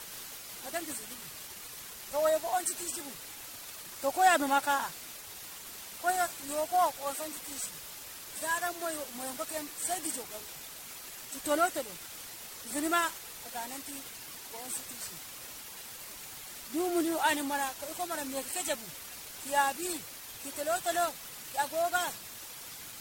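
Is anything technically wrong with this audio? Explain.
Yes. Two faults run through the whole speech clip.

The first is low bit depth with dither, present throughout. Very few bits carry the signal, which fits roughly 6-bit resolution. Dither turns the rounding error into white noise. The result is a constant, even hiss, about 15 dB below the speech, without distortion.

The second fault also lasts the whole clip. Nothing reaches above 16.6 kHz. The sound is swirly, smeared and hollow, and onsets blur. The likely cause is generation loss: repeated re-encoding, around seven passes, in a way that fits 64 kbit/s MP3.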